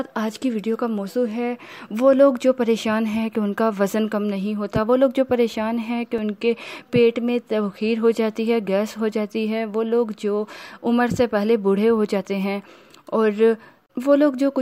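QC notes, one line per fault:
6.18 s, block of digital silence: a 2 ms run of samples drops straight to silence and returns with no fade, so the two abrupt edges merge into a single sharp tick rather than an audible gap, which fits an output buffer not being filled in time.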